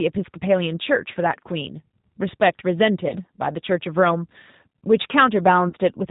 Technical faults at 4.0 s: G.729 codec

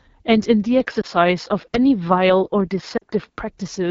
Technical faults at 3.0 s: AMR wideband (HD Voice) codec; lost AMR speech frames

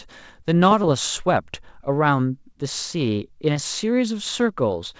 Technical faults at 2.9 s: none

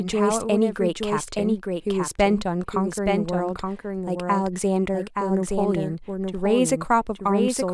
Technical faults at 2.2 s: doubled audio track

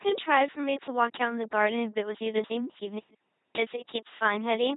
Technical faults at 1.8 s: LPC-10 vocoder

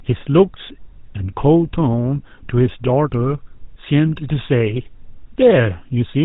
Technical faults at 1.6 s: GSM full-rate codec

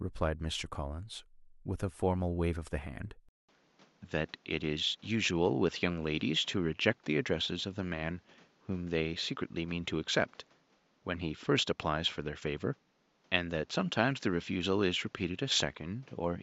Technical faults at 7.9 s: input switched to a poorer device

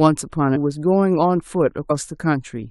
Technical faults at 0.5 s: damaged data in a compressed stream

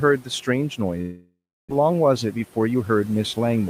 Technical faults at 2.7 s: noise suppressor artifacts; jitter buffer speed-up

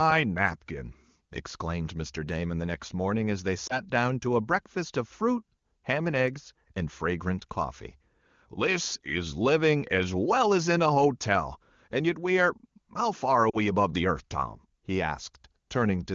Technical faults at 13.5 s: lost AMR speech frames

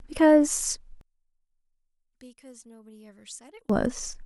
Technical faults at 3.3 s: one channel inverted

